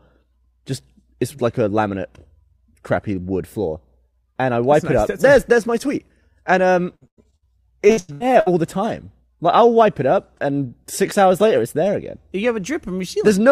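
From 6.95 to 7.46 s, and again from 7.87 to 8.48 s, there is repeated packet loss with a robotic sound. Each stretch has five dropouts of up to about 0.1 s, patched by extending the previous sound. About half of each span is concealed, leaving it choppy.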